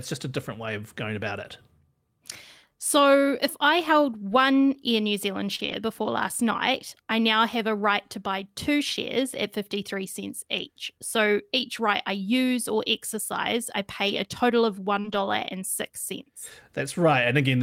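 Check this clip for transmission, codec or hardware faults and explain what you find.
Two kinds of network fault appear, both in the speech.

Short concealed packet loss occurs twice: at 5.55 to 5.61 s, just before "before last night I", and at 15.00 to 15.06 s. Each time about 40 ms of audio arrived too late to decode. The receiver covered the hole by extending the preceding sound, about 33 ms of fill the first time and 39 ms the second. It then crossfaded back. Each event is heard as a brief smeared wobble.

Lost packet rebuilt from error correction occurs four times: 5.59 to 5.74 s, leading into "before last night I"; 7.78 s; 14.06 to 14.12 s, between "use or exercise I" and "a total of"; and 15.04 to 15.18 s. Each lost stretch was replayed from a low-bitrate copy carried in the following packet. The rebuilt spans last 80, 20, 40 and 80 ms, which fits 20 ms packets. There is no gap. 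These passages sound grainier and noisier, and the first and last follow straight on from the concealed losses.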